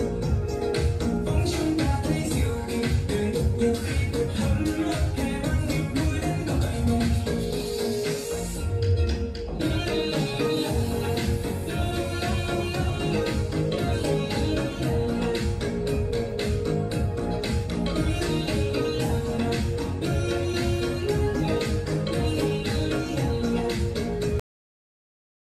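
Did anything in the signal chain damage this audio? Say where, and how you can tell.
Yes. A cut-off end at the driver or buffer stage: at 24.40 s the sound stops mid-event and drops straight to digital silence, because the final buffers were never written.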